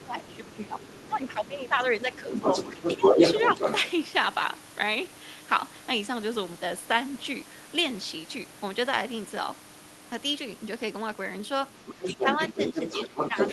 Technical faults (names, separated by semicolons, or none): other side's voice leaking through; speech suppressed in double talk